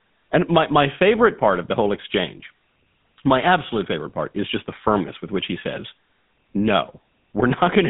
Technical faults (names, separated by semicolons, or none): GSM full-rate codec